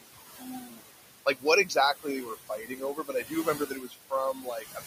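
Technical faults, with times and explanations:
Throughout: noise suppressor artifacts. The suppressor judges each frequency band, frame by frame, on whether it holds steady noise, and pulls those bands down by about 20 dB. The room noise, sitting only about 8 dB below the speech, drops away in the gaps and comes back up under the voice, so the background pumps with the speech.
0.01–0.81 s, 1.26–1.46 s, 2.47–4.13 s, 4.34–4.83 s: speech cut by the noise suppressor. In these stretches the suppressor mistook parts of the voice for noise and turned them down with the background, by about 18 to 21 dB at the deepest point. Across the four spans, roughly half a second, a tenth of a second, one second and a third of a second are affected. Soft consonants and quieter syllables there sound swallowed or faint.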